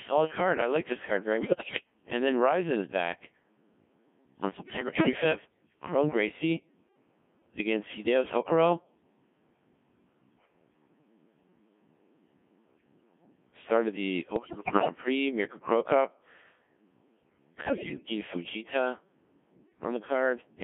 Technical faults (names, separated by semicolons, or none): Codec 2 vocoder; bit errors on digital voice radio